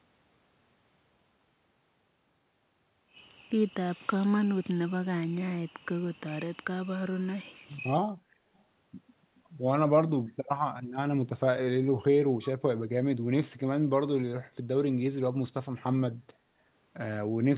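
A speech recording, band-limited with nothing above 4 kHz, as narrowband telephone coding such as G.711 would produce. From 8.57 to 8.62 s a very faint, brief delayed copy of the voice trails about 338 ms behind, an echo leak, likely from a far-end loudspeaker whose echo canceller let residual pickup through.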